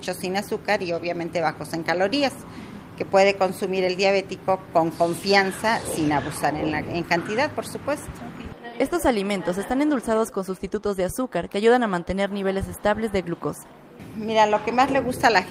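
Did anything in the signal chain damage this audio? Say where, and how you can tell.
No, nothing in the signal chain damaged this audio.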